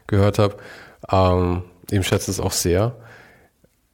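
From 2.07 to 2.39 s, roughly a third of a second, the speech is broken by loose connector crackle: a worn or dirty contact is intermittently opening and closing, chopping the signal into fragments, heard as an irregular burst of scratchy crackle.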